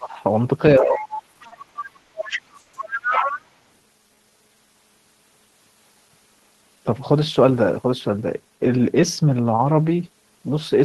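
From the very start to 0.15 s the speech is pulled down by about 25 dB, then recovers. This is speech suppressed in double talk, likely caused by the echo canceller failing to tell the local talker from loudspeaker echo while both sides were active, so it attenuated everything in the microphone path. The same ducking returns from 0.79 to 1.15 s, about 15 dB deep, and from 3.03 to 3.34 s, about 20 dB deep. Each time the level sags noticeably and then comes back.

Between 0.77 and 3.46 s a second voice sits underneath the talker, roughly 10 dB below it. This is the other side's voice leaking through, most likely loudspeaker playback that the echo canceller did not fully subtract from the microphone signal. It overlaps the double-talk dips, which fits the canceller struggling during that period.

From 1.33 to 2.15 s the audio stutters through four short stalls, together 190 ms of filled-in sound, with the longest at 90 ms. 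These are repeated stalls (stutter). Packets arrived late repeatedly, and the jitter buffer kept running dry, so the receiver extended the last sound each time until data returned. Nothing is lost, but roughly a quarter of that span is concealment, giving a halting, dragging rhythm.

At 2.60 to 2.76 s there is a single call audio freeze. The likely cause is a held-up packet stream that emptied the jitter buffer. For about 130 ms the last sound is continued as a fading buzz or hiss rather than dropping to silence, then speech resumes where it left off. No content is missing, but everything after that point runs about 130 ms later.

From 3.74 to 4.74 s the speech slows to about 84% of normal rate while the pitch stays put. This is a jitter buffer slow-down. Running low on reserve, the receiver repeated individual pitch periods and pause fragments many times, adding 164 ms in total. The result is stretched vowels and drawn-out timing.

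From 6.54 to 9.29 s the opposite happens: a jitter buffer speed-up. With surplus audio queued, as after late packets arrive in a bunch, the receiver trimmed short pitch-period segments repeatedly, removing about 200 ms. Speech plays at about 107% speed at unchanged pitch, sounding slightly hurried and compressed until the buffer settles back near its target delay.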